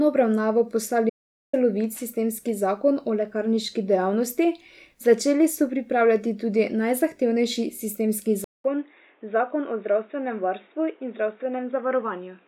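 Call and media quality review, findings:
Audio dropout to silence, 1.10–1.53 s: about 440 ms of silence, no room tone, speech resumes mid-flow at "sistemski zakon". Likely a momentary input loss or mute upstream while the encoder kept writing silence; the content in the gap is unrecoverable.

Input switched to a poorer device, 8.44 s through end of clip: 200 ms silence at the switch, then band-limited audio with nothing above 3.8 kHz, level down about 5 dB, new noise floor roughly 35 dB under the speech. Likely a fallback to a narrowband headset call-profile microphone.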